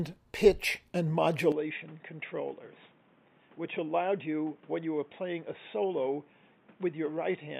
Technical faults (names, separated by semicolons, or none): input switched to a poorer device